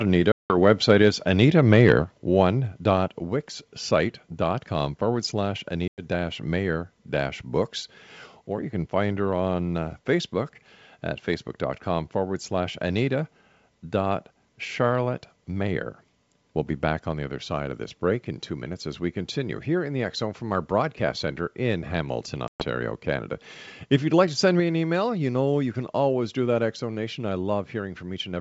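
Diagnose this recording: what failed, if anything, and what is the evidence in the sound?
Packet loss on an ADPCM call, at the network stage: speech drops out in hard-edged holes at 0.32–0.55 s, 5.88–6.01 s and 22.48–22.64 s, losing 180, 100 and 120 ms. Missing audio desynchronises the decoder's predictor and step size, so speech resumes slightly distorted.

Microphone volume stepped down, in call processing: the whole signal, background included, falls abruptly by about 3 dB at 1.02 s, then about 4 dB at 2.04 s and 24.6 s. The likely cause is the call software cutting the device's input volume in single steps.

Microphone overload, at the converter: from 1.72 to 1.94 s the loudest peaks run about 3 dB past the converter's limit, and their flattened tops give a harsh crackle. This is likely an input volume set too high, and it precedes the 2.04 s level drop. G.722 wideband coding at 64 kbit/s adds at most faint damage.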